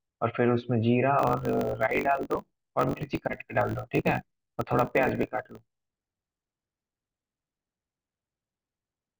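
From 1.17 s to the end, the speech shows a block size mismatch (truncated). One stage writes longer blocks than the next stage reads, so the tail of every block is discarded. The buzz at 50 Hz fits 1024-sample blocks. Dropping those tails makes the speech run about 1.07 times fast at roughly its normal pitch. On a waveform, small discontinuities repeat every 20 ms. A spectrogram shows vertical lines at that spacing, with a 50 Hz harmonic comb underneath.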